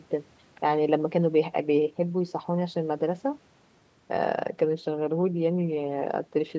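No technical faults can be heard in this speech.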